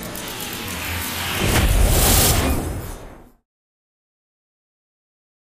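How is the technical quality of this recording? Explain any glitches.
No glitches are audible here.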